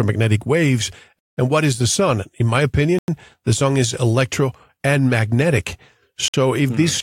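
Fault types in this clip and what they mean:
Bluetooth stall: at 1.19, 2.99 and 6.28 s the speech cuts to silence for 179, 96 and 57 ms, the second just before "the sun is electro", the third right after "is electro and magnetic". Interference likely delayed packets until the headphone buffer emptied and playback waited for resends.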